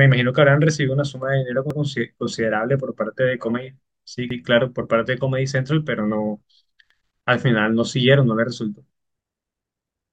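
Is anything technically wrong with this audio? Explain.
Yes. The speech has overlapping chunks at 1.70, 4.30 and 6.90 s. Each 2.5 s chunk starts 100 ms early, so that slice repeats as a regular stutter, not the silent gap a dropout leaves.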